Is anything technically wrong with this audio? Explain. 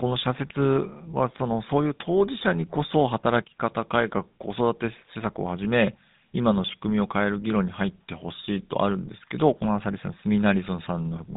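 Yes. The speech has passed through the GSM full-rate codec for its whole length. The codec models the vocal tract and drives that model with a sparse, regularly spaced pulse excitation, discarding most of the excitation detail. The result is a plainly audible buzzy, gravelly roughness on the voice, consistent with the 13 kbps GSM full-rate scheme. The band is telephone-narrow, roughly 150 Hz to 3.7 kHz, with nothing above 3.8 kHz, so sibilants sound dull.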